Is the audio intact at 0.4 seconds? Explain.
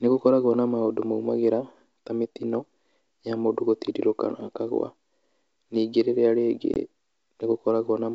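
Yes, the audio is intact at 0.4 seconds, with the speech passing cleanly through G.722 wideband telephone coding at 64 kbit/s.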